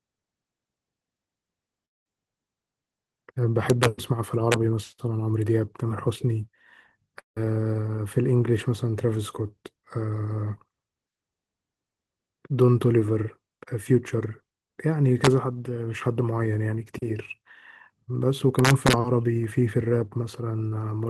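Right at 1.85 to 2.06 s the speech cuts out and a fading buzz covers the gap. That's likely a long network dropout, with about 200 ms never delivered and the receiver stretching the last sound before going quiet. Integer overflow then hits at 3.70 to 3.85 s and again at 4.52 s: peaks only about 1 dB over full scale wrap to the opposite sign, giving harsh cracks far nastier than clipping. The same fading-then-silent gap returns at 7.19 to 7.37 s, about 170 ms lost, again likely a long network dropout. The overflow cracks come back at 15.25 to 15.27 s and 18.59 to 18.93 s, all riding on the Opus call path's roughly 12 kHz band limit.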